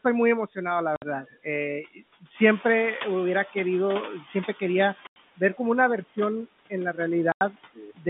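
Speech carried over a G.711 A-law telephone path, band-limited to roughly 150 Hz to 3.6 kHz, shows four kinds of fault. Throughout, a noise suppressor estimates the steady room noise and pulls the bands it judges to be noise down by about 17 dB, frame by frame. This produces noise suppressor artifacts: the background sinks in the gaps between words and swells back up underneath them, so the noise floor pumps with the speech. Packet loss filled with silence also occurs. Where packets never arrived, the receiver substituted silence, leaving hard-edged holes in the audio at 0.96 s (60 ms), 5.07 s (90 ms), and 7.32 s (90 ms), the last one immediately after "en la". Those lengths fit packets of 30 ms each, which points to two or three consecutive packets missing per gap. Speech cut by the noise suppressor happens where the suppressor misjudges part of the speech as noise and attenuates it along with the background. 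This occurs from 1.25 to 1.47 s, with the deepest drop about 16 dB over roughly 150 ms of affected sound, from 1.83 to 2.01 s, with about 13 dB over roughly 100 ms, and from 7.75 to 8.07 s, with about 17 dB over about 300 ms. These stretches sound swallowed or faint. Finally, the noise suppressor is catching up after the room noise jumps by about 11 dB around 2.5 s and then settles about 15 dB below the speech. The suppressor's noise estimate trails that rise, so from 2.34 s the louder background passes with less reduction and only sinks gradually to about 10 dB of cut as the estimate adapts, taking about 2.3 s to settle by 4.61 s.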